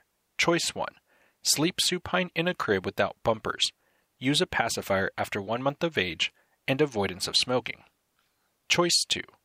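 A short speech recording, and there's nothing technically wrong to point to anywhere in it.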